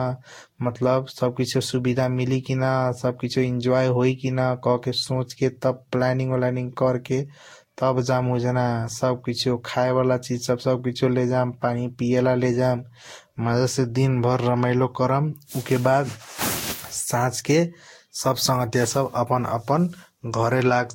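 Throughout the speech, the sound is swirly, hollow and smeared, with blurred consonant attacks and nothing above 16.6 kHz. This is generation loss, likely from roughly four lossy passes that fit Vorbis near 60 kbit/s. A single encode at that rate would sound less smeared.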